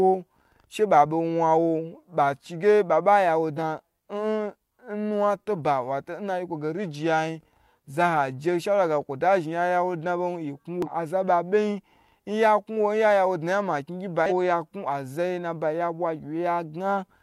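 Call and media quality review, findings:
Three short glitches in the speech: 3.53–3.58 s just after "ya wo", 10.82–10.88 s, 14.26–14.32 s. Damaged data in a compressed stream. Corrupted frames are misread by the decoder, which loses sync until it finds the next frame header.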